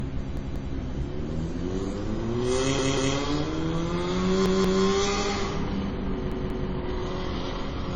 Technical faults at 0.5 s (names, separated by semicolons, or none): MP3 compression; repeated buffer